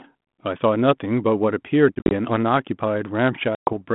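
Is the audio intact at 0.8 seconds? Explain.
Yes, the audio is intact at 0.8 s, with no fault at that moment.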